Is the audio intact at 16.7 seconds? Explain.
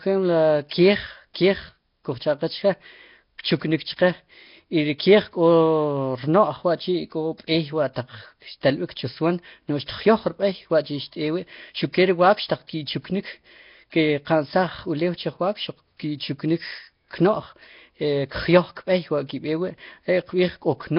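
No. Nellymoser compression runs through the whole clip, including 16.7 s. Nothing sounds above 5.3 kHz, and the speech carries a rough, hissy halo with a smeared, underwater quality. This is likely the Nellymoser Asao codec at a low bitrate, which fills weak bands with noise instead of coding them.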